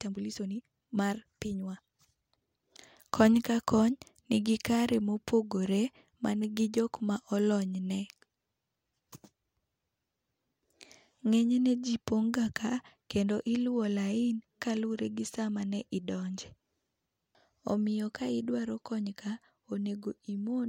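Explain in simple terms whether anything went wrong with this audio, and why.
From 0 to 2.82 s the speech runs about 1.58 times too fast yet keeps its pitch, sounding rushed: likely a time-stretched section.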